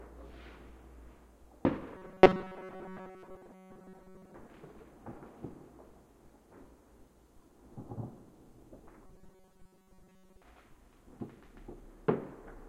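Audio likely arrived too seldom, so short buffers of about 5.3 ms were repeated in place of most of the missing sound. This robotic sound from repeated short buffers imposes a rigid, metallic 188 Hz buzz from 1.97 to 4.34 s and again from 9.06 to 10.42 s.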